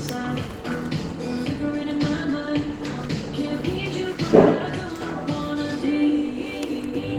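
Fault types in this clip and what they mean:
Call bitrate drop: from about 1.77 s to 5.17 s the sound turns rough and watery. That's what happens when the call's bandwidth estimate sags and the encoder gets squeezed from 32 kbps down to 18 kbps. It sits at that floor for roughly three seconds. With fewer bits to spend, it codes everything more coarsely and starts trimming the top end. Things clear up again once the rate climbs back.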